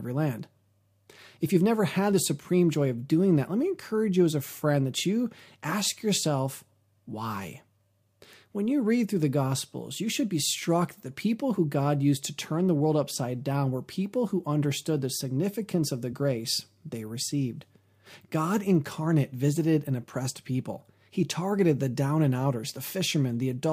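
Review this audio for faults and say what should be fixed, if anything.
The speech has compressed frames skipped at 11.57 s and 16.12 s. At each point about one frame of audio, roughly 20 ms, never plays. The decoder either found it missing or rejected it as damaged. The sound jumps forward by that amount. To prevent it, protect the file or stream against corruption and loss, and re-encode from an intact source.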